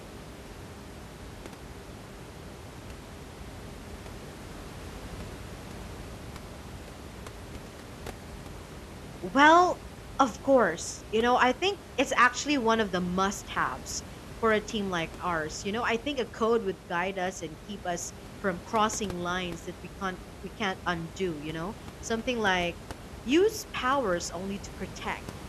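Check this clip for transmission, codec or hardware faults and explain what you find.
No transmission, codec or hardware faults found in the speech; the only thing beneath it is the room's own background noise, sitting about 16 dB below the voice.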